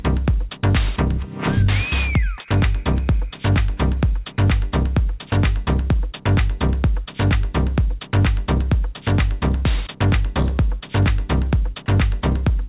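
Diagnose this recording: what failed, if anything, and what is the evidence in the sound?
Twice the sound briefly gives way to a flat hiss, at 2.38 s and 5.3 s, each gap about 20 ms, with roughly 10 ms of real audio lost. This is likely sound dropped by the voice detector in call processing: the sender judged that stretch to be background and stopped transmitting, so the receiver filled it with comfort noise.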